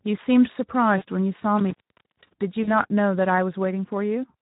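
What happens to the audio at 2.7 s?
Between 2.63 and 2.69 s there is VoIP packet loss concealed by the speech codec. About 40 ms of audio is missing, which fits two lost 20 ms frames. The decoder fills the gap by extending its last pitch and filter state at decreasing gain, so the speech smears into a brief buzzy tone or coloured noise that fades. Because each rebuilt frame carries forward into the next, the sound stays weak or distorted for a short time after real packets resume.

That gap sits on top of Speex codec damage that is clearly audible across the whole clip, including this moment. The coding is consistent with a rate near 11 kbps, which leaves too few bits for the excitation, so the speech around the dropout sounds noisy and hoarse.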